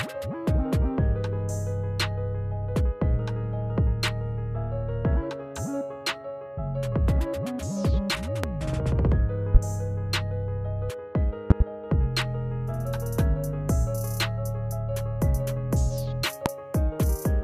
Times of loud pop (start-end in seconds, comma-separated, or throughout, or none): 8.44-8.47, 9.55-9.58, 11.50-11.64, 16.46-16.49